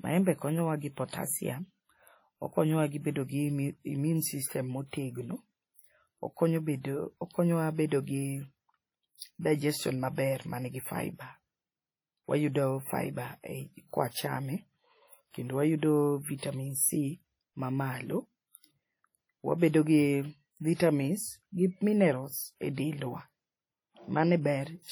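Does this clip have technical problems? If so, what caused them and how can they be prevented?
Yes, there are two problems. Throughout the speech there's a heavy washy, ringing quality, with a hiss that swells and fades along with the talking. That's likely WMA compression from an older transform encoder, and the damage fits a low bitrate around 32 kbps. The quantisation noise gets smeared across long blocks, and at that rate the quieter spectral detail gets zeroed, so you're left with a watery, swirly texture. To prevent it, encode at a much higher bitrate or use a modern codec with better block switching.

There's also a pre-echo from 9.17 to 9.22 s, just before "digestion maber manigi fibre". A short burst of hiss, about 48 ms long, arrives ahead of a sharp onset, and the attack itself sounds softened. The encoder spread the noise for that loud moment across its whole block, so the noise leaked into the quiet gap in front of it. 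To prevent it, use an encoder that switches to short blocks on transients, or simply give it more bitrate.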